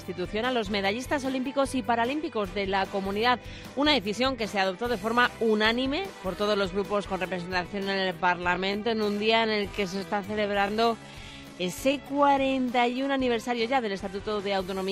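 From 7.29 to 13.05 s, software likely slowed a time-stretched section to 0.66× speed while holding pitch, so the sound drags abruptly.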